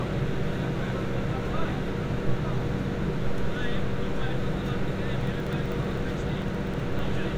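An everyday sound recording with periodic USB or driver dropouts from 5.21 to 7.05 s: about thirty tiny skips, each roughly half a millisecond, tick every 63.5 ms. Their strict regularity separates them from random clicks.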